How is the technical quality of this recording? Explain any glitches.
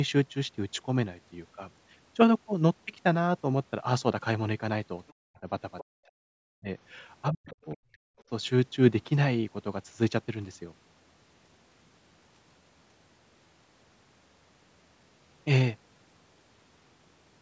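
Echo cancellation problems between 5.07 and 8.24 s affect the technical quality. Through the call's microphone processing, nothing reaches above 8 kHz.

Other side's voice leaking through: From 5.07 to 5.13 s and 5.79 to 5.84 s, likely residual loudspeaker echo escaped cancellation. It shows up as brief scraps of a second voice, very faint at first and then somewhat louder.

Speech suppressed in double talk: From 5.14 to 5.48 s, 5.89 to 6.69 s and 7.33 to 7.84 s, the canceller likely mistook overlapping talk for echo and clamped down. The talker's voice dips by around 40 dB.

Background gated by the echo canceller: At 8.12 to 8.24 s, the canceller muted the microphone hard during loudspeaker playback. The room sound drops by about 33 dB for a short moment and then returns.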